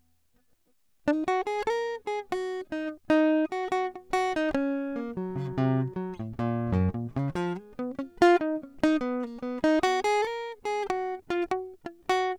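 It's a music clip, and nothing technically wrong turns up anywhere in it, so there's nothing to time or trace back to a cause.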